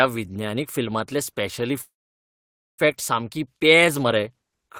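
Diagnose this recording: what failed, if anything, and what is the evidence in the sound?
Network call audio freeze: delayed packets likely emptied the jitter buffer, leaving a near-silent gap from 1.81 to 2.81 s; speech resumes at "सामकी पेज मरे" intact.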